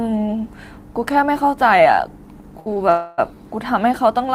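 At 2.59 s and again at 2.74 s the speech hangs briefly: two short stalls from a late packet, the first filling 63 ms up to 2.68 s, the second 19 ms up to 2.78 s. Each time the receiver ran dry and prolonged the last sound until data turned up, then carried on with nothing lost. The held sound has a faint buzz or dip. A spectrogram shows the harmonics frozen flat across each span, and the waveform shows a short repeating, near-periodic stretch.

From 2.90 s to 3.20 s comes a longer call audio freeze of 282 ms. The last sound is drawn out as a fading buzz or hiss that never falls to silence. Speech then resumes from where it stopped, later than it should, with nothing skipped. This likely comes from packets held up in transit until the jitter buffer emptied. On a spectrogram it appears as horizontal smeared bands thinning out over about 0.3 s. The waveform shows a decaying, repetitive envelope instead of speech-shaped bursts.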